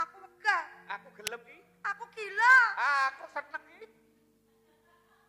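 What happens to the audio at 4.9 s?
Nothing goes wrong at 4.9 s; the audio plays through that point intact.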